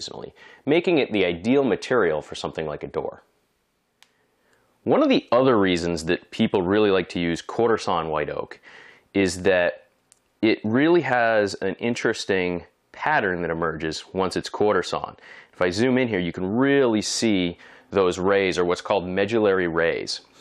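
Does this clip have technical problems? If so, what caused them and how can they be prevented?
No, nothing here stands out as a technical problem, so there's nothing that needs preventing.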